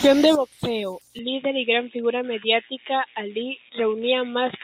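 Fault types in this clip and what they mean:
Input switched to a poorer device: from 1.19 s to the end the speech turns dull and boxy, with nothing above 3.8 kHz, no gap, similar level and faint new noise about 50 dB down, likely from a switch to a narrower-band microphone or headset profile.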